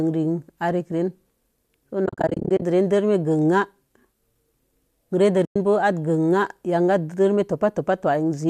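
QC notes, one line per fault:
2.06–2.62 s: AAC frame loss with muting. About 330 ms of frames vanish in bursts across 560 ms, the longest around 40 ms. Zeroed spectra fade through overlapping windows, leaving soft-edged dropouts.
5.45–5.56 s: AAC frame loss with muting. About 110 ms of frames are lost. The decoder silences the missing frames, so the speech fades out and back in smoothly rather than cutting sharply. The short gaps fit the 10 ms frames of a low-delay coder, likely AAC-ELD.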